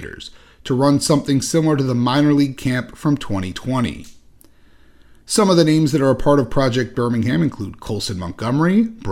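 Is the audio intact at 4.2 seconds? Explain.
Yes, the speech at 4.2 seconds is intact, with no audible dropout, click, distortion or other fault at that moment.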